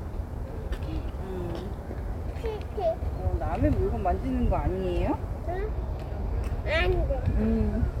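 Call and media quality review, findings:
Video or display buzz, 0.0 to 5.61 s: screen or video cable coupling into the audio path. A 60 Hz buzz locked to the picture's field rate, with hash above it, sits faint, roughly 30 dB under the sound, then stops.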